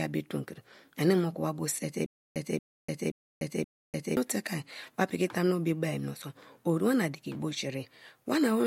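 From 2.06 to 4.17 s, after "wa bo sie te", a stutter with silent gaps: a 231 ms fragment repeats four times, each followed by 296 ms of digital silence, a 527 ms cycle. This is likely a stalled stream replaying its last buffer. Speech resumes at "teke wa piki".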